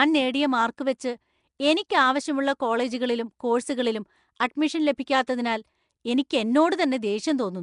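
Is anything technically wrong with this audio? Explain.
Yes, there are two faults.

Throughout the speech there is a rough, hissy halo and a smeared, underwater texture, with nothing above 10.6 kHz. This points to Nellymoser compression as the likely cause. The codec works on short blocks with a fixed, small bit budget per sample, so weak bands are dropped and refilled with noise, a pattern consistent with a rate around 44 kbps. The damage is plainly audible. Ordinary low-bitrate MP3 tends to sound swirly and metallic, whereas this codec adds a constant grainy hiss to the voice.

At about 1.59 s there is pre-echo. A short burst of hiss, roughly 11 ms long, runs just ahead of a sharp attack, and the onset itself sounds softened. It happens because the codec spreads its quantisation noise evenly across a whole block, so noise meant for the loud attack also fills the quiet gap just before it. 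A click or dropout is a single discontinuity. This is a short hiss that arrives before the attack, which sets it apart from both.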